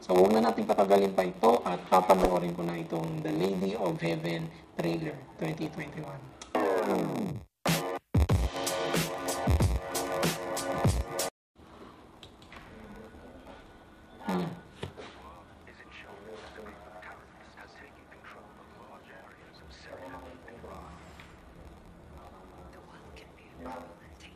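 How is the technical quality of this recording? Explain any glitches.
The quality is compromised throughout by a block size mismatch (padded). From start to finish, each short block of audio is followed by a sliver of silence, which fits blocks of about 480 samples padded to 512. Those regular gaps produce a steady buzz at 93.8 Hz and stretch playback to 0.938 times normal speed. Timbre stays natural, which rules out a sample-rate mismatch, where slowing would also lower the pitch.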